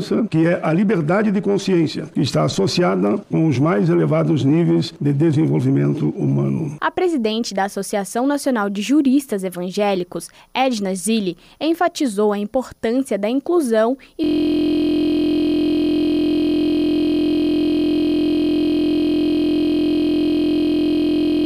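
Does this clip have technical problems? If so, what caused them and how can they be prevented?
Yes. At 14.24 s the audio locks into a system hang loop and stays stuck right through to the end. A 23.22 ms slice repeats over and over, about 43 times a second, so it comes across as a steady buzz. The machine or its audio driver froze while the sound hardware kept replaying the same ring buffer, and that loop length fits a 1024-sample buffer. To prevent it, track down the driver or system stall, and have the audio path mute output when the buffer stops getting refilled.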